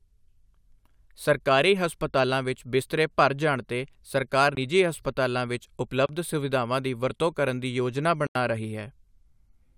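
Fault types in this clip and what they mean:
Bluetooth stall: the speech cuts to silence three times, for 18, 30 and 86 ms, then carries on, likely because the headphone buffer ran dry.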